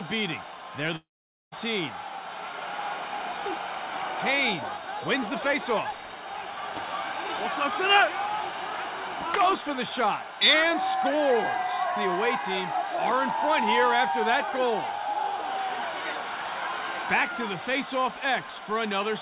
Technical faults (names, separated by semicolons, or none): long network dropout